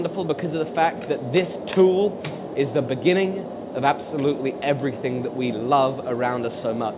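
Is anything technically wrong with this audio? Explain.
No, nothing technically wrong stood out on listening to this audio.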